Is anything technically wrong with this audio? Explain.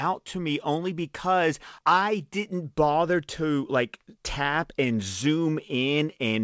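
No, nothing is technically wrong with this speech clip: it carries the ordinary character of a call path, with its content stopping at about 8 kHz in a way that fits a wideband codec such as G.722 at 64 kbps.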